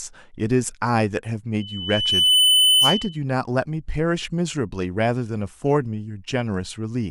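From 1.60 to 3.18 s, loudspeaker feedback squeal: a 3 kHz tone swells over under a second to around 10 dB above the speech, unlike a steady interference whine.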